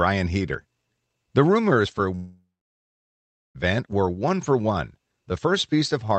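A long network dropout runs from 2.15 to 3.58 s. The speech dissolves into a fading buzz that leaves about 1.1 s of silence, then returns with roughly 1.4 s of audio missing, likely from lost packets the receiver tried to conceal.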